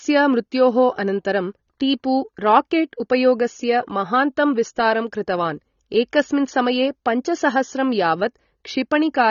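Speech with AAC compression damage throughout: nothing above 6.9 kHz, plus warbling, fizzy smear on sibilants, unlike plain low-pass dullness; likely a low-bitrate AAC-LC encode, around 24 kbps.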